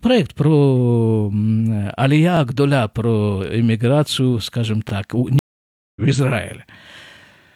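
A speech recording with two kinds of fault. Overlapping chunks produce brief stutters at 2.37–2.39 s and again at 4.89–4.92 s, just after "про иммиграцию скажем". At each join about 25 ms of audio plays twice, because each 2.5 s chunk begins before the previous one ended. A stream reconnect follows at 5.39–6.01 s: 571 ms of silence as the connection drops and a new decoder starts, with the speech resuming roughly half a second further on, so that stretch is skipped.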